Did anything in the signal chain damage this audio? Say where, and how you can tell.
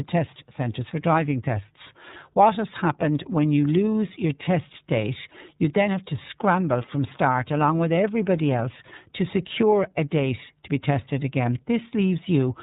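Yes, at the codec stage, throughout the speech: iLBC coding. A spectrogram shows a hard ceiling at 4 kHz with nothing above it. Each block is coded on its own, which fits 30 ms frames at about 13.33 kbps, giving a plainly rough, synthetic edge.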